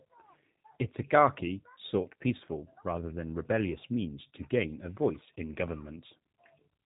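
G.729 codec coding runs throughout the speech, plainly audible. Each 10 ms frame is rebuilt from a vocal tract filter, a pitch predictor and a few pulses, which fits an 8 kbit/s coder. Nothing above 4 kHz survives, and the voice sounds slightly rough and synthetic.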